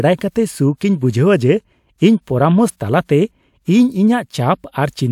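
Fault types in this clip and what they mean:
No faults found in the speech; there are no dropouts, clipping, distortion, or timing or level errors anywhere in the clip.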